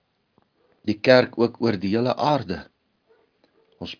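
No technical faults are audible.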